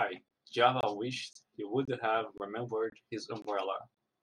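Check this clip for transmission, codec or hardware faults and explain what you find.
The speech is broken by a regular series of brief, hard-edged silences, a gap between chunks, at 0.28, 0.81, 1.33, 1.85, 2.38, 2.90, 3.42 and 3.95 s, each about 23 ms long. Each hole drops the signal abruptly to silence and resumes just as sharply, giving a steady stutter roughly every half second. The audio appears to have been delivered in 0.5 s chunks with a small stretch of silence inserted at every join, so nothing is lost, but the flow is interrupted at each boundary.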